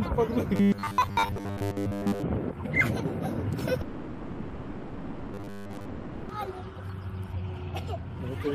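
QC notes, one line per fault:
0.56–2.23 s and 5.34–5.85 s, robotic sound from repeated short buffers: the sound turns into a rigid, metallic buzz fixed at 100 Hz while still loosely following the underlying audio. A 100 Hz pitch fits a 10 ms stretch being replayed over and over, likely because new audio arrived too seldom and most of the real material was skipped. Unlike a dropout, the sound keeps moving forward; it is only coarsened, not stalled.
3.81–6.31 s, long network dropout: about 2.5 s of audio is missing. The gap never falls silent: it is filled the whole way through by a continuation of the last sound. The audio comes back at 6.31 s without the lost part. This is likely a long stall in delivery rather than a buffering rhythm, so the material stops advancing, unlike the robotic buzz. The 5.34 s robotic stretch falls inside this gap.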